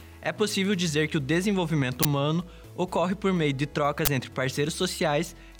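At 2.03 to 2.05 s and again at 4.05 to 4.08 s, an uninitialised buffer plays. Each time, memory was read out before audio filled it. Each burst lasts about 21 ms, which fits a 1024-sample buffer. It is heard as a crack or brief digital noise.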